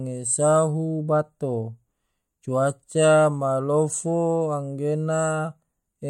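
No technical faults are audible.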